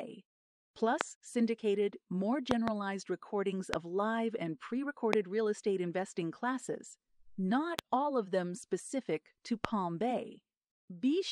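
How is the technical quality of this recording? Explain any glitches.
The recording is marred by seven loud pops over the speech. They are single pops at 1.01, 3.74 (just before "live and pre"), 5.13 (between "live and pre" and "real estate investing classes"), 7.79 (between "estate investing classes not" and "all of them specific") and 9.65 s, plus a double pop from 2.51 to 2.70 s. Each sounds like a sharp thump, roughly 20 to 25 dB above the speech, which carries on underneath. The likely cause is a voltage spike from a plug, switch, static or driver glitch, shaped by the downstream circuitry. On a waveform each shows as a tall, narrow spike. On a spectrogram it is a thin vertical line across all frequencies.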